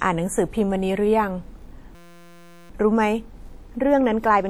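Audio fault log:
1.95–2.70 s, system hang loop: the system froze and one 5.8 ms slice repeated, producing a steady 172 Hz buzz. This fits a 256-sample buffer.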